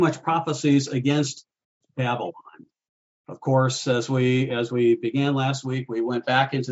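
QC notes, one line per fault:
No faults found.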